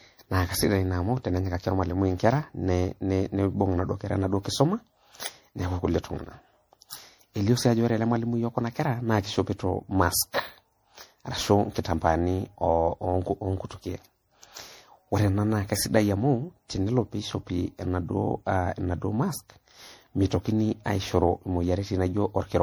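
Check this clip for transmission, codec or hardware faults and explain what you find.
One codec fault runs through the whole speech clip: generation loss. Throughout, the sound is swirly, hollow and smeared, with blurred attacks, more damaged than one pass at what sounds like 64 kbit/s MP3 would leave. That points to the likely cause, about seven repeated re-encodes, each piling fresh quantisation noise and spectral holes onto the last.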